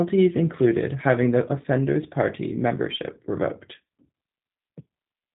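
G.729 codec coding runs throughout the speech. The voice is rebuilt from a vocal-tract filter, a pitch predictor and a few pulses per frame, which fits an 8 kbit/s stream. Nothing above 3.8 kHz remains, and the speech sounds plainly rough and synthetic.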